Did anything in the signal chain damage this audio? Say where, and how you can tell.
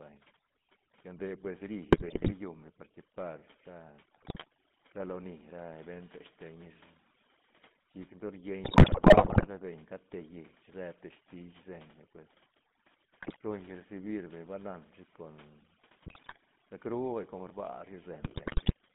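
Yes. Overdone noise removal runs through the whole recording and belongs to the call-processing stage. The background drops away, scattered with twinkling specks. A suppressor set too aggressively is pulling individual frequency bands down or shutting them off whenever they sit close to its noise estimate. The softer parts of the speech fall below that threshold and get removed along with the noise.

The GSM full-rate codec is also present throughout, and its damage is plainly audible. The speech has the buzzy, gravelly roughness of this codec. The channel is a narrow line band of roughly 150 Hz to 3.6 kHz at 13 kbps. The codec rebuilds speech from a vocal-tract model excited by evenly spaced pulses, keeping only every third excitation sample. That coarse excitation produces the grit, and nothing above the band edge survives.

GSM bit errors hit the network link in six bursts: 1.90 to 2.33 s (just after "lla nde pues"), 4.14 to 4.46 s, 8.64 to 9.47 s, 13.20 to 13.37 s, 16.03 to 16.38 s and 18.22 to 18.73 s. 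Each burst breaks into squawks, pops and gargling. Corrupted filter, pitch or gain parameters reach the decoder, which bends the spectrum or spikes the level frame by frame. The longest burst, around 8.6 to 9.5 s, hits 40 frames.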